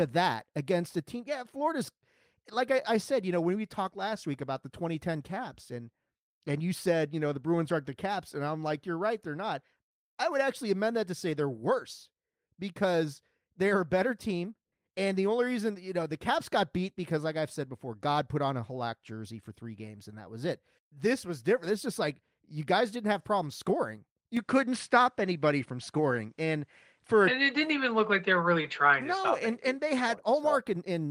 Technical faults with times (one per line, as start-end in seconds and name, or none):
24.37-30.15 input switched to a poorer device